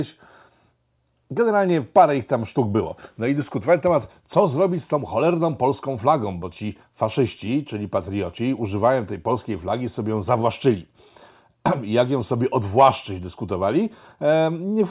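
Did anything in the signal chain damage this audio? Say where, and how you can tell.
No, nothing in the signal chain damaged this recording.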